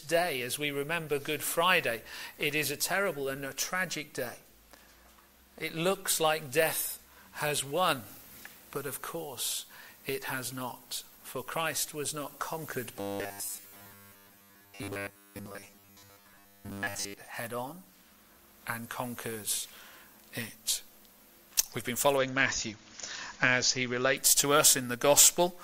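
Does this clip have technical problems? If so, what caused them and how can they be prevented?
Yes. From 13.00 to 17.14 s the sound becomes a rigid metallic buzz at 100 Hz, likely robotic sound from repeated short buffers, about 10 ms each, replacing most of the real audio. Keeping the audio thread fed with adequate buffering and scheduling priority prevents it.

From 22.17 to 24.17 s quality drops abruptly, with nothing above 7.2 kHz and more codec artefacts. This is an adaptive stream at a lower bitrate, consistent with a switch from roughly 128 to 48 kbit/s MP3. A larger playback buffer or a higher minimum bitrate prevents it.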